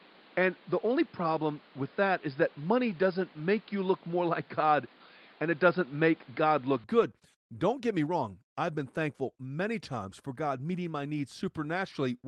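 From 0.00 to 6.84 s the speech runs dull and boxy, with nothing above 5.1 kHz, a noise floor roughly 30 dB under the signal, and a level about 5 dB off. This is likely an input switched to a poorer device, with no silence at the change.

From 6.97 to 7.03 s, on the Opus call path at 32 kbps, about 40 ms turn briefly rough and grainy, with no gap. This is a lost packet rebuilt from error correction, which fits two 20 ms packets decoded from their low-bitrate copies.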